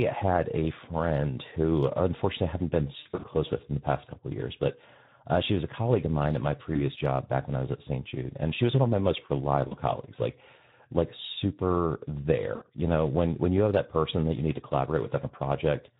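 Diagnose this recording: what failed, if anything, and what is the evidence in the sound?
The codec stage failed throughout. The Speex codec is plainly audible across the whole clip. The speech sounds hoarse and noisy, with a grainy edge. The bitrate is 11 kbps, which gives the CELP coder too few bits to model the excitation well. The pitch pulses and residual therefore come out rough instead of clean, and anything above 8 kHz is only a shaped noise fill.

The network stage also failed, as VoIP packet loss concealed by the speech codec. It occurs at 2.99–3.26 s, 6.73–6.80 s, 9.67–9.77 s and 12.55–12.64 s. The first event is the worst: about 160 ms of audio is missing, scattered over roughly 240 ms, with the longest gap at 60 ms. In each gap the decoder repeats its last pitch and filter, so the sound smears into a fading buzzy tone or coloured noise. The sound stays weak briefly after packets resume.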